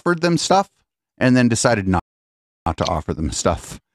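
A playback stall cuts into this speech clip from 1.99 s to 2.66 s, silencing the output for about 670 ms in mid-flow before the sound carries on. The gap is not a pause in the talking but a dead stretch where the player had nothing to send to the output, most likely because its buffer ran dry or its audio thread was held up, after which playback resumed.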